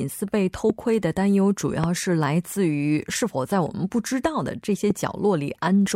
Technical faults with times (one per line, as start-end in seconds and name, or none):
0.70-0.72 loud pop
1.84-1.86 loud pop
4.90-4.93 loud pop